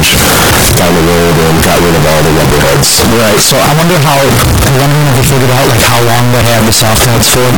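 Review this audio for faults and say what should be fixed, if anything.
Float read as integer, throughout the clip: the speech is extremely loud and harsh, squared off at a nearly fixed, high level, with background noise as loud as the speech, though pitch stays followable. This likely comes from 32-bit float samples being read as 32-bit integers, so sign and exponent bits set each value. To prevent it, carry the sample format through the chain and convert float to integer explicitly.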